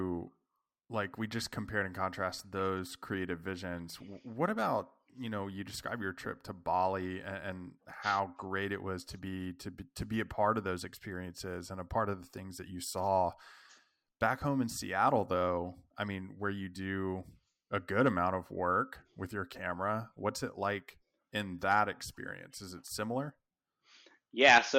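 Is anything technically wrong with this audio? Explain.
No, nothing in this speech recording stood out as a technical problem on listening.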